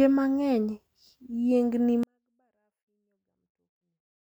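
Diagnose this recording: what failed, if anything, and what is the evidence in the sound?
At 2.03 s the speech suddenly falls to a near-inaudible level, down about 48 dB, yet stays clean through to the end. That points to a 24-bit alignment error at the sample-format conversion stage: 24-bit samples sitting in the low bytes of a 32-bit word were read as full 32-bit integers.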